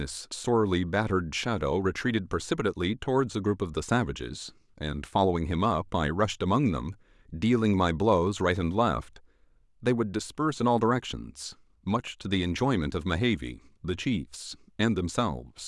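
A dropped buffer (overrun) at 1.82 s interrupts this speech clip: the sound jumps ahead, skipping roughly 10 ms with no gap of silence. The likely cause is the software failing to collect a block of samples before the hardware overwrote it, splicing the surrounding audio together.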